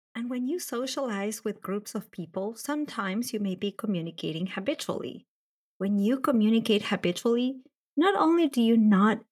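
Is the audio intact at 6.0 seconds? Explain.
No. At 6.0 s the clip is inside an automatic gain rising span, from 5.78 to 9.26 s. The gain control judged the input too quiet and raised its gain by about 7 dB over those seconds, so speech and background noise swell together.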